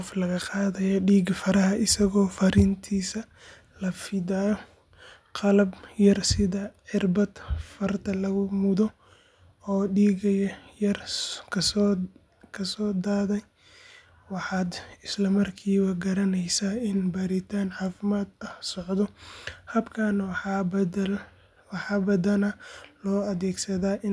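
No technical faults can be heard anywhere in the recording.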